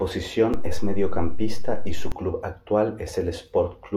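At 0.54 s a DC step shifts the waveform's zero line, giving a low thump. The offset lasts until 2.12 s.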